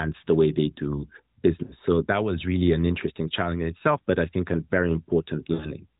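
Speech carried over an AMR narrowband link, with nothing above 4 kHz and only light codec colouring. Lost AMR speech frames appear at 1.64 to 1.76 s, after "the way they do", and at 5.54 to 5.72 s. Each gap points to about three 20 ms frames failing. The decoder stretches the last pitch into a smeared, fading tail, which shows as flat, blurred harmonics and a shrinking waveform envelope.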